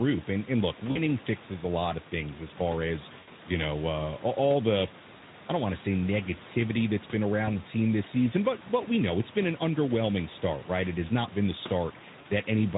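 Four short dropouts at 0.91, 3.19, 7.45 and 12.21 s, lasting about 40, 80, 20 and 40 ms. That's VoIP packet loss concealed by the speech codec: the decoder stretches the last sound into a fading buzzy smear, and it takes a moment to come back clean afterwards.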